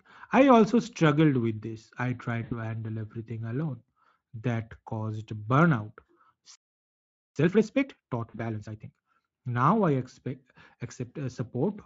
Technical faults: VoIP packet loss concealed by the speech codec; playback stall; time-compressed catch-up

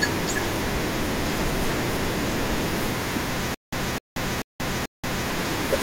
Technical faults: stutter with silent gaps

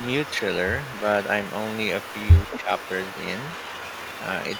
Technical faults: echo leak; speech suppressed in double talk

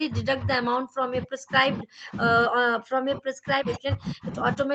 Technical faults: speech suppressed in double talk

